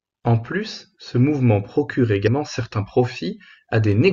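At 2.24 s, running to 2.28 s, the speech is interrupted by a brief glitch of about 40 ms, the mark of damaged data in a compressed stream. Corrupted bytes in the encoded file made the decoder misread the frames there and lose sync until it found the next valid frame header. Unlike a plain dropout, which leaves silence, or a single click, this glitch comes from the decoder losing its place in the stream.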